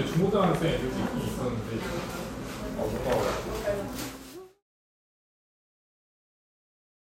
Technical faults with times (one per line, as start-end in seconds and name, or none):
none